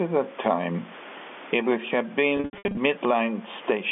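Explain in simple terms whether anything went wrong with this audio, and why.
Yes, two things went wrong. Throughout the recording there is gain pumping. The likely cause is that the microphone level was set far too high, so an automatic level control kept slamming the volume down on every loud sound and letting it rise again in the pauses. Loud and soft parts end up closer in level, so the whole recording sounds squeezed and breathing.

The second problem is packet loss with pitch repetition, from 2.37 to 2.77 seconds, right after "time it would have". In that stretch, chunks of the audio never arrived. About 300 ms went missing in small pieces spread over 400 ms, with the longest single gap about 80 ms. To cover each hole, the receiver replayed the last tiny slice of sound, so the audio there turns briefly buzzy and held, then fades back in.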